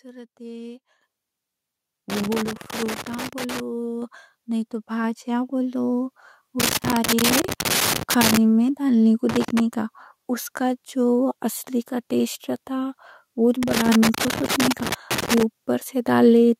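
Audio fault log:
1.02 s, 4.02 s, 5.04 s: microphone volume stepped up. The call software judged the microphone too quiet and raised its input volume three times, by about 10 dB, then about 4 dB, then about 2 dB. Each time, speech and background noise jump louder together in a single step.
2.10–3.60 s, 6.60–8.37 s, 9.29–9.60 s, 13.63–15.43 s: loose connector crackle. A worn or dirty contact keeps making and breaking, chopping the signal into irregular bursts of crackle and scratching. The second burst ends just before "میں ڈالنے کو", and the third follows it.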